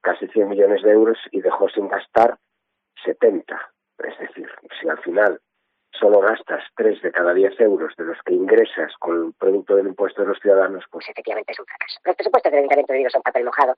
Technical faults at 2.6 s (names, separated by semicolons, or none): none